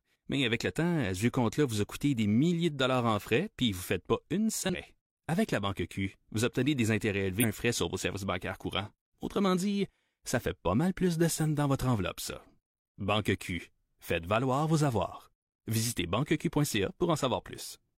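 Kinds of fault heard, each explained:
Damaged data in a compressed stream: a couple of spots in the speech where the compressed data itself got mangled, so the decoder reads garbage, loses its place in the frame sequence and has to hunt for the next valid header before it can carry on. You hear it as a brief glitch, once at about 4.69 to 4.75 s and again at 7.39 to 7.44 s, each lasting roughly 60 ms.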